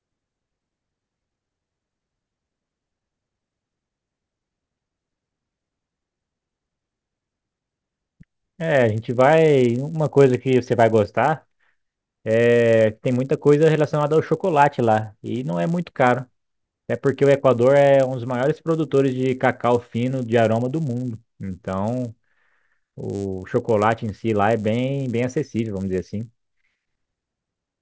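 Right through the speech there's a faint 100 Hz buzz under the signal: the resampler restarted on every block, so each 10 ms block edge ticks, fitting a 44.1-to-16 kHz conversion.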